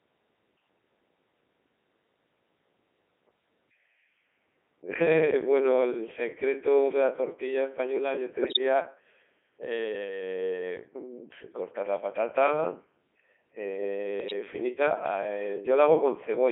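A Codec 2 vocoder shapes the speech for the whole clip. Only pitch, voicing, energy and a spectral envelope survive, and the decoder rebuilds everything from sine waves inside a 200 Hz to 3.4 kHz band. The result is heavily robotic and buzzy, consistent with the 3.2 kbit/s mode.

Bit errors on digital voice radio strike from 8.40 to 8.58 s and again from 14.20 to 14.33 s. Flipped bits corrupt the frame parameters, so the synthetic voice lurches in pitch, level and tone into warbling gibberish. The first burst is harsher, suggesting around one bit in ten.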